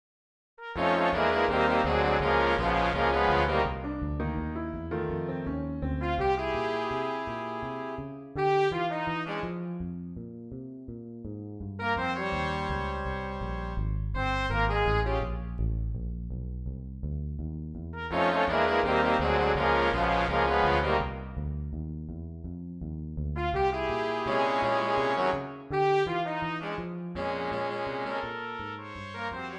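No technical faults occur at any point in the audio, so there is nothing to describe in time order.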